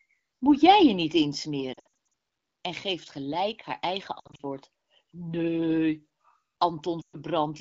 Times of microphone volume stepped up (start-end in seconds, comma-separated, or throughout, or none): none